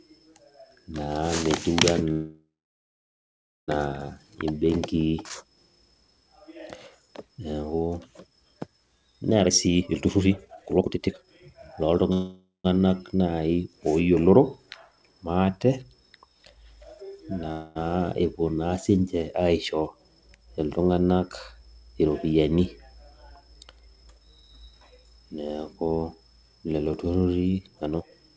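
Call audio freezes interrupt this speech recording at 2.12–3.70 s, 12.13–12.66 s and 17.51–17.77 s, the last just before "epuo naa sinche aisho". The likely cause is packets held up in transit, draining the jitter buffer. The receiver stretches the last sound into a fading buzz, falling silent for about 1.2 s in the first freeze and 0.15 s in the second. When packets resume, the audio picks up where it stopped, so nothing is lost but each gap adds delay.

Jitter buffer speed-ups occur at 9.41–12.10 s, 21.94–24.50 s, and 27.67–28.36 s after "lelo turrurri". Too much audio had piled up, so the receiver repeatedly cut out short pitch-period slices. Speech runs at 155%, 109% and 168% of normal speed at unchanged pitch, dropping roughly 1.5 s, 0.2 s and half a second. The first and last sound clearly hurried. Throughout, the G.722 call path leaves nothing above 8 kHz.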